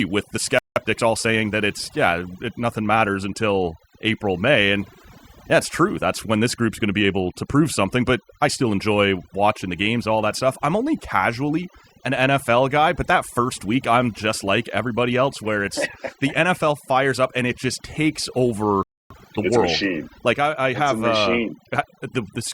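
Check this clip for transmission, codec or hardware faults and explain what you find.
Three kinds of fault are present: heavy-handed noise reduction across the whole recording, and two playback stalls, each followed by a hurried catch-up.

Throughout the recording, the background is pressed down and speckled with twinkling artefacts. That is overdone noise removal. A suppressor set too aggressively pulls individual frequency bands down or out whenever they sit close to its noise estimate. It takes the quieter parts of the voice along with the hiss, which leaves the tonal gaps and the chirping residue behind.

The sound cuts out abruptly twice in mid-flow. The first gap comes right after "with the" and runs from 0.59 to 0.76 s, about 0.18 s. The second follows "and it just takes" and runs from 18.83 to 19.10 s, about 0.27 s. These are playback stalls. In each, the output falls silent and then resumes where it left off. 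The likely cause is the player running short of data or its audio thread being blocked, so nothing reached the output until it recovered.

Straight after each gap, the speech rushes ahead at unchanged pitch. This is time-compressed catch-up. From 0.76 to 1.92 s the pace is about 1.15 times normal. From 19.10 to 19.64 s, after "and it just takes", it jumps to 1.5 times. To clear the backlog built up during the stall, the player drops small slices of audio and cross-fades over the joins. That keeps the pitch steady but produces the hurried delivery.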